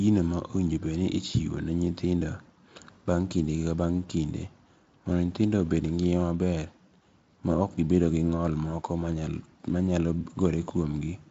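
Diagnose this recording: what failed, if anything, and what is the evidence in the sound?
Nothing failed in this recording.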